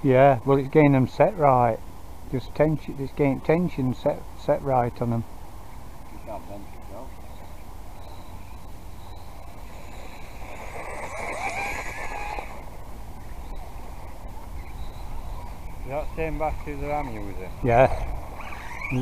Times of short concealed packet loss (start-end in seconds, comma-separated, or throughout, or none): none